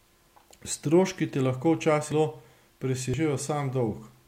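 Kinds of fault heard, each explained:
Compressed frames skipped: at 2.12 s and 3.14 s the speech jumps ahead about 0.3 s and 0.1 s as codec frames drop.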